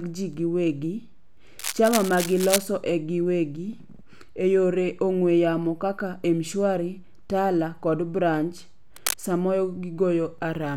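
A worn cable or connector was likely being moved, its contact resistance jumping about, which is cable scratch noise: dense, uneven crackling bursts from 1.59 to 2.66 s, ending just before "e giwegi", and again from 8.96 to 9.20 s, each only a little quieter than the speech.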